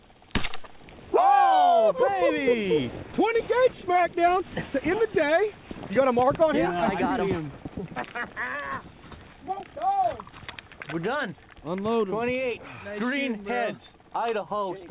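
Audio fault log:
There is no fault.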